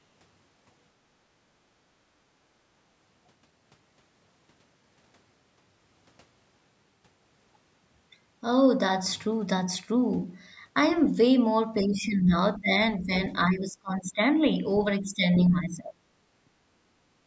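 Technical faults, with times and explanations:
1.81 to 1.95 s, background gated by the echo canceller. The room sound dips about 7 dB for roughly 150 ms. The canceller turned the microphone down while the loudspeaker played.
11.82 to 12.34, 12.58 to 12.70, 12.99 to 13.12, 13.33 to 14.48 and 15.00 to 16.07 s, speech suppressed in double talk. The speech drops by roughly 10 to 25 dB, for up to a second at a time. Likely the canceller confused the talker with loudspeaker echo while both sides spoke.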